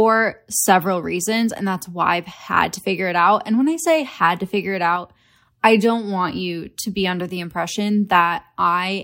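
A sudden gain jump runs from 4.96 to 5.42 s, just after "had to figure it": speech and background noise drop together by about 4 dB in one step, then return before "I don't want you". The likely cause is a gain setting applied without a ramp.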